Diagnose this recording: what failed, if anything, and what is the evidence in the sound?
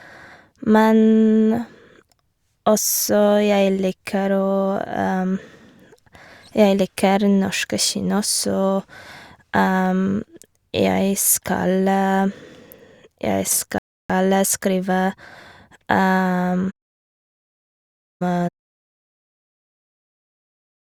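A rebuffering stall at the playback stage: the speech falls silent from 13.78 to 14.10 s, adding 0.31 s, then resumes exactly where it stopped, unlike a dropout, which loses audio.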